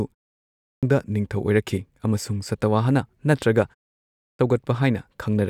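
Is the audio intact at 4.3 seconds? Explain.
No. At 4.3 seconds the audio falls inside a clipped start after a pause, running from 3.98 to 4.39 s. After a 0.32 s gap, the output path has gone idle and needs time to wake, so about 412 ms of the speech that resumes is simply lost. The speech bursts in abruptly, missing its opening sounds. Muted pauses would differ: the background would dip in the gap, but nothing after it would go missing.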